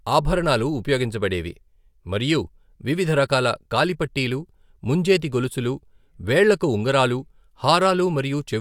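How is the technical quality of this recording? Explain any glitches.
Listening closely, nothing in the recording stood out as a technical problem.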